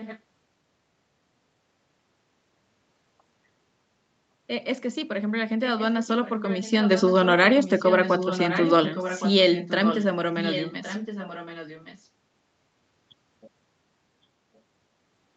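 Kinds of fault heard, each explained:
Echo leak: speech returns as a weaker copy about 1.1 s later, likely from a loudspeaker whose echo canceller let pickup through. After 7.6 s it grows to about 10 dB below the speech. Spectrograms show faint, time-shifted harmonic ghosts; waveforms show small bursts in pauses.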